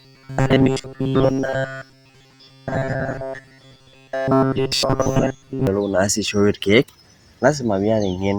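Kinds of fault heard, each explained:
Robotic sound from repeated short buffers: From the very start until about 5.67 s, the speech turns into a rigid, metallic buzz locked at 133 Hz. It still loosely follows the words. The likely cause is audio arriving too seldom, so playback keeps looping its last short fragment. A 133 Hz buzz fits fragments about 7.5 ms long. Much of the real audio in that stretch, around two-thirds or more, is skipped.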